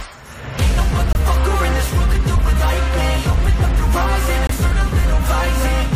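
At 1.13 s and again at 4.47 s the sound drops abruptly to silence for about 40 ms (42 ms, then 44 ms), a corrupt frame muted fault. Damaged compressed frames were rejected by the decoder and replaced with silence, each gap spanning what sounds like two frame lengths, while timing stays intact. The waveform shows a flat line with sharp edges, and the spectrogram shows a clean vertical blank band across all frequencies.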